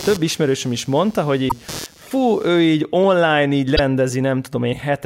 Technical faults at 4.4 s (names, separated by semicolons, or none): none